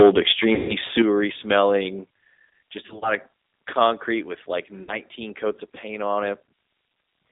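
Throughout, the speech passes through a G.729 codec, which fits an 8 kbit/s stream. It rebuilds the voice from a filter and sparse pulses inside a 250 Hz to 3.7 kHz band, leaving it plainly rough and synthetic.

From 0.0 to 1.02 s, the input was likely driven about 7 dB too hot, causing microphone overload. The converter flattens roughly 4% of the samples, so the loudest syllables crackle harshly.

Within that span, from 0.55 to 0.75 s, VoIP packet loss concealed by the speech codec removes about 140 ms. The decoder stretches its last pitch and filter into a fading buzz or coloured noise, and the voice stays weak until it recovers.

From 2.86 to 3.15 s, 100 ms of audio is lost in short gaps spread over 160 ms, the longest 40 ms. Each gap is filled with fading sound extrapolated from the speech before it.

At 4.83 to 4.99 s, between "with like" and "coats of paint on", 50 ms goes missing. 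It leaves a brief fading fill before the speech steadies.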